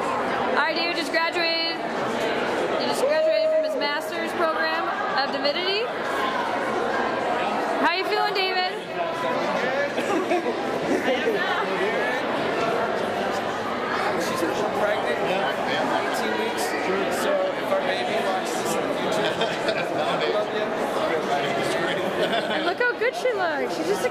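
No technical faults can be heard anywhere in the audio. There is nothing to place in time or trace to a cause.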